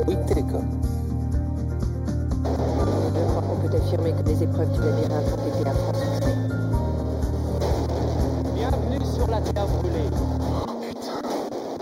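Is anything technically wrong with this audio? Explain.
Yes. Channel delay (comb filtering) runs through the whole clip. One channel arrives a fraction of a millisecond behind the other, roughly 0.2 ms, and when the two are folded to mono, the components they share cancel at regularly spaced frequencies. The first notch sits somewhere near 3 kHz, with further notches evenly spaced above it. The audio sounds hollow and phasey, with the upper presence region dulled in a fixed way.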